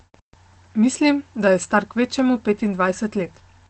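No technical faults can be heard anywhere in the speech.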